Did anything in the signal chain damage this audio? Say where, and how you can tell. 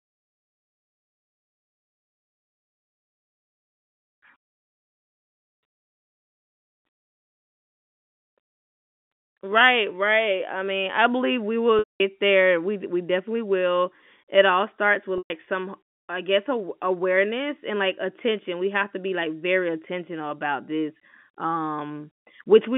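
Yes. The network dropped packets twice, and packet loss with pitch repetition bridged each gap: at 11.79 to 12.00 s (210 ms lost) and at 15.18 to 15.30 s (120 ms). In both, the sound briefly holds a buzzy repeated pitch period, fades into silence as the concealment runs out, then cross-fades back in. Both gaps divide neatly into 30 ms steps, which points to 30 ms packets. The band-limited G.711 telephone coding on the line is normal.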